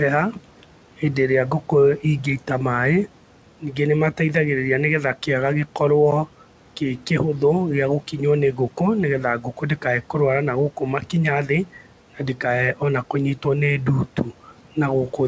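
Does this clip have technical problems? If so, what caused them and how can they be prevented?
Yes. Speech cut by the noise suppressor occurs between 9.41 and 9.84 s. The suppressor mistook parts of the speech for background, so around 150 ms of quieter sound was pulled down with the noise, by about 9 dB at worst, leaving it faint and swallowed. To prevent this, use a gentler suppression setting or a suppressor that tracks speech more reliably, and lower the room noise so less suppression is needed.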